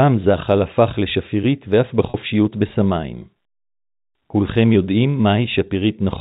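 Around 2.10 to 2.14 s there's a packet loss with pitch repetition: roughly 40 ms of speech went missing, which fits two 20 ms packets, and the receiver patched the hole by looping the last pitch period, so you hear a brief held, buzzy note over the narrowband G.711 telephone sound.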